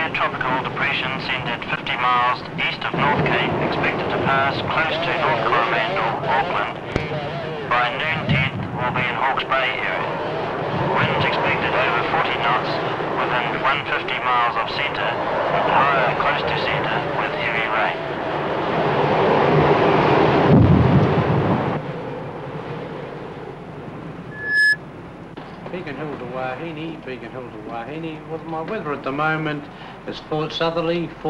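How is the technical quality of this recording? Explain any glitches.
The recording has one clear glitch, a burst of loudspeaker feedback squeal from 24.31 to 24.78 s. A microphone was picking up a loudspeaker it was feeding, and at 1.7 kHz the loop's gain went above one, so that frequency reinforced itself on each pass. It is heard as a steady, piercing 1.7 kHz tone that swells over roughly a third of a second to about 5 dB above the surrounding audio, then stops. That gradual self-building rise is what distinguishes feedback from an interfering whistle or tone, which would appear at full level straight away.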